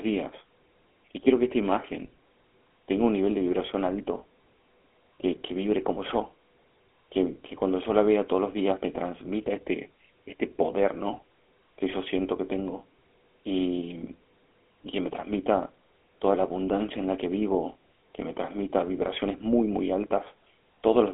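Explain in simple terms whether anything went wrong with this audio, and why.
Yes, something went wrong: the whole recording, from start to finish, has passed through the GSM full-rate codec, the compression used by early digital mobile phones. It rebuilds the voice from a simplified model driven by regular pulses, which leaves a plainly audible buzzy, gravelly roughness. The sound is also squeezed into a narrow telephone band, roughly 250 Hz to 3.4 kHz, with nothing at all above about 3.8 kHz, so it sounds muffled and thin.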